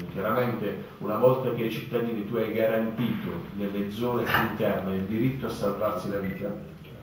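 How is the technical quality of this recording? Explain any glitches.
The recording has one problem running the whole way through: imaging from sample-and-hold upsampling. Material at a 16 kHz rate was brought up to 48 kHz by just repeating samples, unsmoothed, so a mirrored copy of the spectrum sits in the 8 to 16 kHz band, about 23 dB down. You hear it as a bright metallic fizz that tracks the sound's level.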